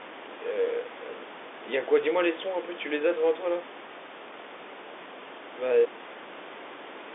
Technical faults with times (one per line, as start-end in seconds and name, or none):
none